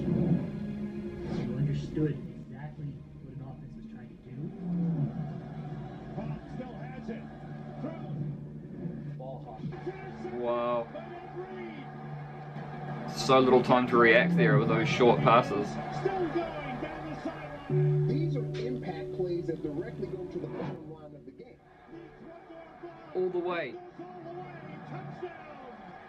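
Zipper noise turns up three times: 2.00 to 2.55 s falling about 10 dB, 12.40 to 13.42 s rising about 10 dB, and 19.97 to 21.32 s falling about 15 dB. The gain jumps in unsmoothed 3 dB steps, a few per second, and each jump ticks.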